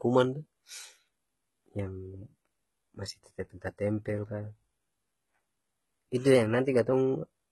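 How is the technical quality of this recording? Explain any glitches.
Technical quality is poor, with two problems. Throughout, the treble is gritty and metallic, with lispy sibilants whose harmonics don't line up with the body of the sound. This is likely heavy HE-AAC compression at a very low bitrate, around 16 kbps: the upper band is synthesised from copied lower bands rather than merely dulled. From 6.35 to 6.93 s, speed and pitch jump together by about 5.7%, nearly a semitone (roughly 96 cents), then snap back. That points to a likely drift correction step, distinct from wow because it is a single abrupt shift rather than a wavering.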